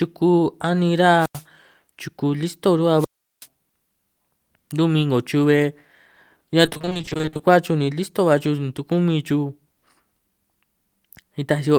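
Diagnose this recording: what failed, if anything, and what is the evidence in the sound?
The speech hits two wireless microphone squelch dropouts, both at the radio link ahead of any digital stage. From 1.18 to 1.44 s the hiss rises, then there's a mute of about 90 ms before the speech returns on "chuku listo". Just after "chuku listo", from 2.97 to 3.47 s, it happens again with a longer mute of about 380 ms. That's the FM carrier fading until the receiver's squelch shuts the output.

Between 6.65 and 7.41 s there's repeated packet loss, a network problem, giving that choppy, robotic quality. The stretch breaks into a rapid chain of tiny holes, none longer than about 20 ms, and roughly half the span is filled by stretching the previous audio. That points to nearly twenty lost or late packets in quick succession. The concealment keeps looping the last fragment, so pieces of the speech drop out.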